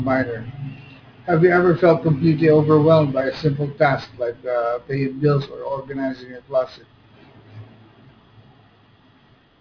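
Sibilants come out gritty and metallic across the whole speech clip. This is aliasing: it was resampled to 11 kHz without filtering, so content above 5.5 kHz folds back, roughly 30 dB below the signal.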